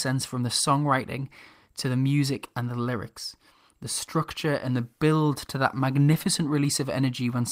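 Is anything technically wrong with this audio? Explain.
No, nothing is technically wrong with this audio.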